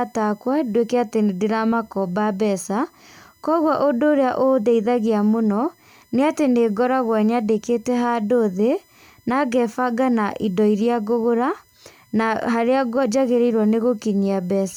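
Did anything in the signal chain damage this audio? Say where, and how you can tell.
Yes, USB whine leaking through power or ground wiring: 1 ms bus frames leave steady spectrogram lines at 1 kHz multiples throughout, strongest at 12 kHz, roughly 40 dB below the speech.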